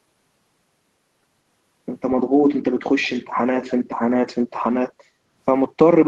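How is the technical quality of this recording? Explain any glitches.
Two short glitches from the echo path of a call can be heard in the speech.

From 3.62 to 3.74 s, a faint delayed copy of the speech, trailing by about 169 ms and roughly 20 dB below it, is an echo leak, likely from a loudspeaker on the far end whose echo canceller let some pickup through. Unlike room reverb, it is a distinct, separate repeat.

From 5.09 to 5.26 s, the background is gated by the echo canceller. The room sound dips by about 6 dB for roughly 150 ms, then recovers as the canceller releases the microphone.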